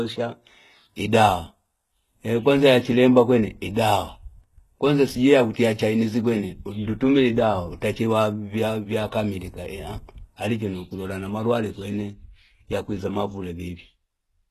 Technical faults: HE-AAC compression

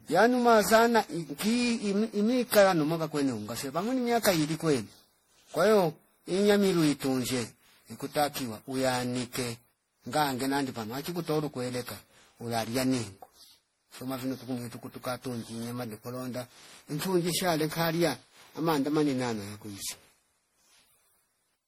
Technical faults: generation loss

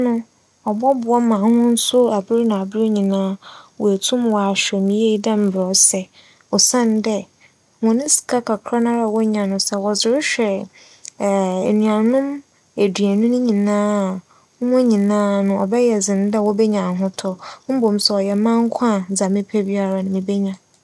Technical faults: resampler restarted on every block

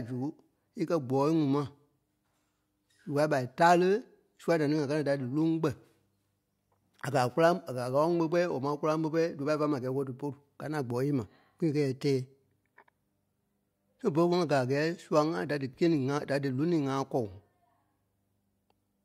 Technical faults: none

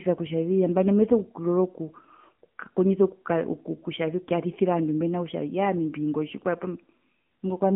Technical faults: AMR narrowband mobile codec

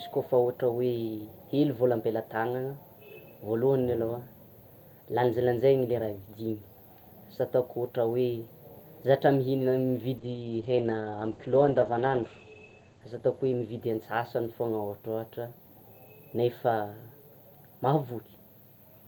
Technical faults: call bitrate drop

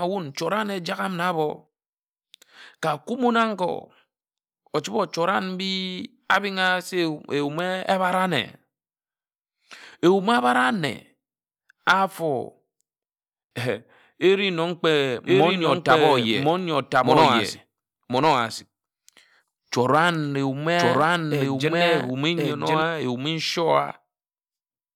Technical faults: doubled audio track

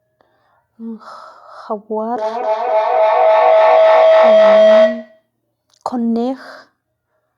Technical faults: feedback howl

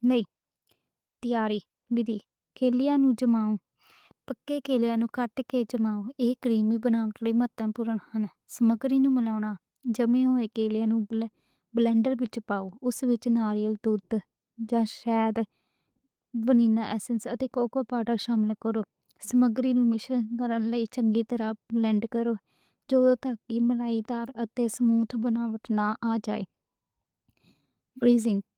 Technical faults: none

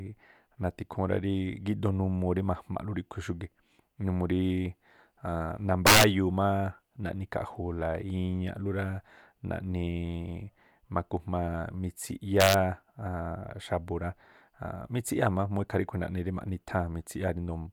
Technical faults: integer overflow

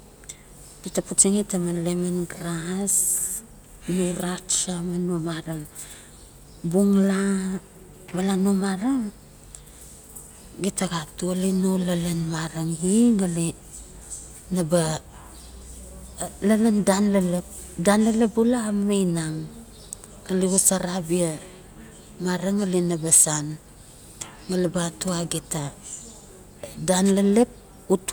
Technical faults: none

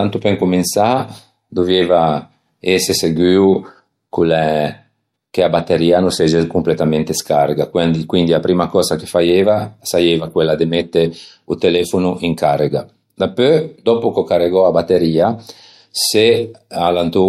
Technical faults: none

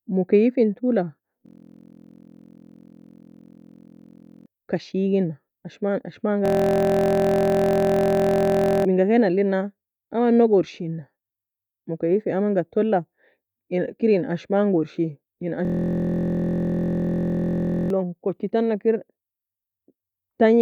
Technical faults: system hang loop

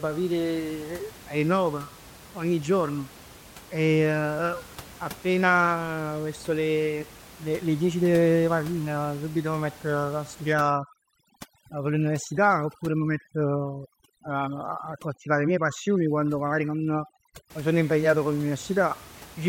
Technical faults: overdone noise removal

